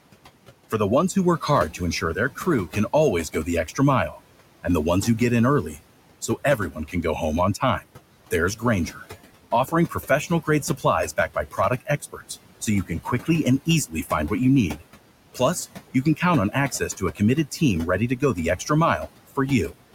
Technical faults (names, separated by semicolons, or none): noise suppressor artifacts; speech cut by the noise suppressor